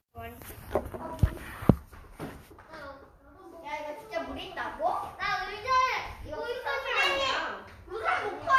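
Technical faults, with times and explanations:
Nothing wrong turns up here at all; the sounds in this recording come across without a single technical hiccup worth pointing out.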